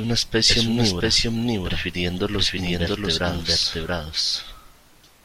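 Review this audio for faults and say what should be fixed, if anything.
A doubled audio track runs throughout: the speech repeats about 0.7 s later at roughly equal level, with no decay or room colour. A second, slower capture path is likely. Route the source through one path only.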